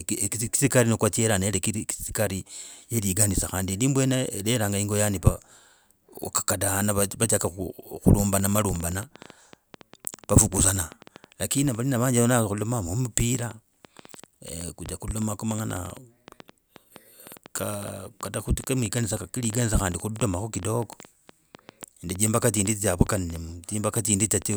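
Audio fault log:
8.40–24.55 s, train of clicks: from here to the end there's a steady peppering of ticks, around a hundred of them at about 7.4 per second but unevenly spaced, and they're the same sharp pop each time. They peak roughly 5 dB above the speech and carry straight through the pauses, so they're clearly riding on top rather than coming from the talker. Likely interference from nearby gear or a faulty connection or power supply injecting pulses.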